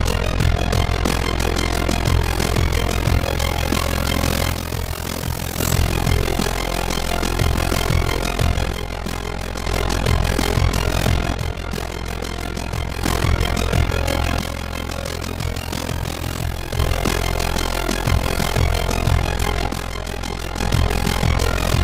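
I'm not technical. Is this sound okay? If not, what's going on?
No. Overlap-add ripple runs throughout: the sound was cut into overlapping pieces and rejoined unevenly, so its loudness pulses about 40 times a second, giving a rough flutter.

One channel drops out at 4.5–5.6, 8.7–9.7, 11.3–13.0, 14.4–16.8 and 19.7–20.6 s. The sound abruptly gets quieter, likely because one stereo side briefly goes missing.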